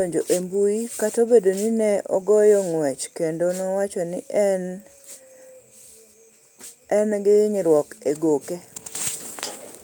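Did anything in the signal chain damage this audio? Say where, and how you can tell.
No, nothing in this speech recording stood out on listening as damage from any stage of the signal chain.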